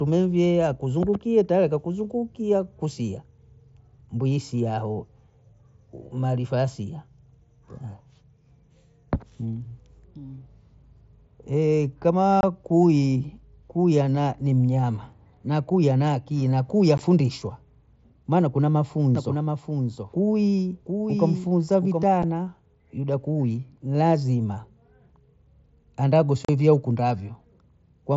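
Voice packets on the Bluetooth headset link go missing without concealment at 12.41 to 12.43 s, at 16.98 s, and later at 22.23 s and 26.45 to 26.49 s. Each loss leaves a hole of 7.5 to 37.5 ms with hard, abrupt edges in the mSBC wideband speech.

From 19.15 to 22.03 s, a doubled audio track appears. A second copy, most likely picked up again through a slower capture path, trails roughly 0.7 s behind at about 5 dB lower. It is dry and full-band, and it cuts in and out abruptly.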